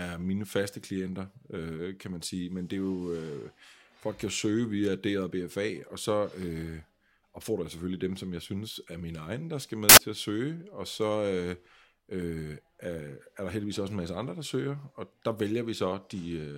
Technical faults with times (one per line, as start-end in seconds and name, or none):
9.89-9.97 samples built from the wrong bytes